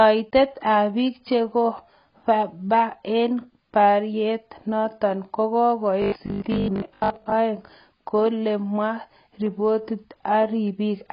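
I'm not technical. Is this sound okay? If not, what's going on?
No. AAC compression runs through the whole clip: the speech sounds dull and smeared, with a fizzy, warbling edge on hissy sounds. This is likely heavy squeezing by an audio compressor that throws away detail to save space.

Robotic sound from repeated short buffers appears from 6.02 to 7.32 s, ending just before "aeng koulegomwa". The voice turns into a stiff 50 Hz buzz, likely because tiny 20 ms pieces of audio were replayed while roughly half the real sound was skipped.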